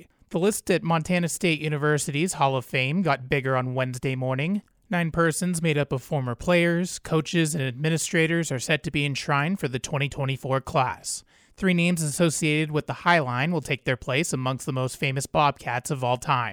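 No technical faults can be heard anywhere in this speech recording. Nothing in the signal path calls for comment at any point.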